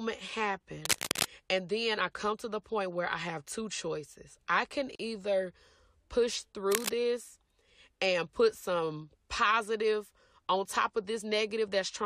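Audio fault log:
0.85–1.26 s and 6.72–6.90 s, cable scratch noise: dense, irregular bursts of scratchy rustle sit over the speech at roughly the speech's own level, likely from a worn cable or connector being moved. Unlike a single click or crackle, each burst is a continuous ragged texture lasting a fraction of a second.
4.95–4.99 s, gap at a join of encoded pieces: the speech stops for 41.5 ms with smeared edges, then carries on exactly where it stopped. That points to separately encoded pieces about 10 s long, joined with their padding left in. Unlike a dropout, no sound is lost.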